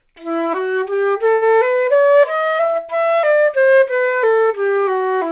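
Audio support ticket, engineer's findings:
Short stall from a late packet at 1.34 to 1.44 s: jitter buffer ran dry, last sound stretched about 76 ms, nothing lost. Spectrogram shows smeared, repeated frame; the band stops at 4 kHz, consistent with G.711.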